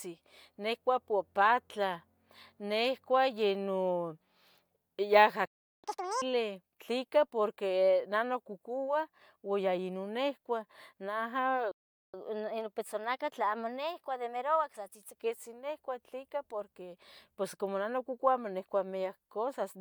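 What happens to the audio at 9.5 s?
Nothing goes wrong at 9.5 s: the speech carries straight through that moment without a dropout, click or other fault.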